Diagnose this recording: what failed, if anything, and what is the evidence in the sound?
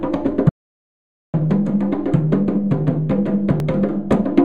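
Audio dropout to silence from 0.49 to 1.34 s: about 0.85 s of the sound is replaced by silence with no room tone, likely an input device or link loss.

Damaged data in a compressed stream at 3.60 s: a brief glitch as the decoder loses frame sync on corrupted bytes and resynchronises.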